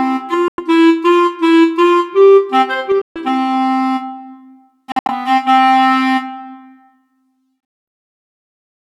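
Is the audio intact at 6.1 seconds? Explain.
Yes, at 6.1 seconds the audio plays through intact, with no dropout, click, distortion or other fault to be heard at that point.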